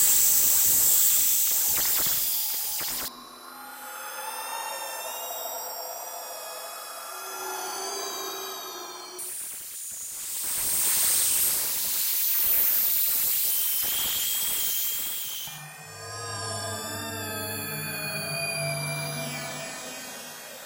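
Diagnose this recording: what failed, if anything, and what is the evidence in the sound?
A doubled audio track is present from the very start until 3.08 s. A second, full-band copy of the sounds trails the original by about a second, sitting roughly 5 dB lower. It carries no decay or room colour, so it is not reverb. At 3.08 s it stops abruptly. The stage is likely the capture or editing chain, with a slower second path or a misaligned edit mixing a duplicate copy in.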